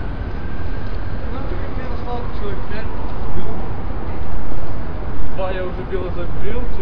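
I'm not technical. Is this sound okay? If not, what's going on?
Yes, the recording is technically sound, with nothing in the signal itself that points to a problem from beginning to end.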